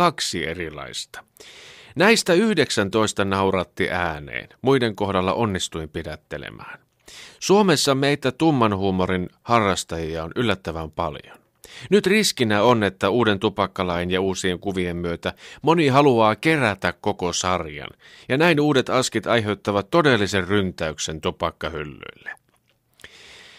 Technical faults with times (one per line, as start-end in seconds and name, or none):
none